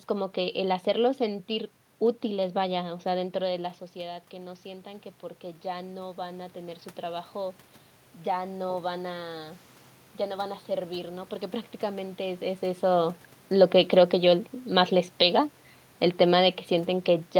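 From 3.58 to 7.62 s, automatic gain rising lifts voice and room noise together by about 6 dB, unlike the talker's movement, which changed only the voice.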